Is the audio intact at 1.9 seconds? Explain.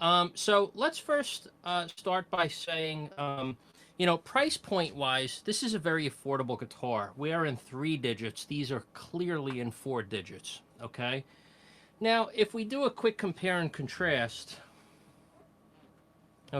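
No. A burst of packet loss at 1.89–1.99 s is bridged by a fading continuation of earlier sound, not silence, and about 80 ms is skipped.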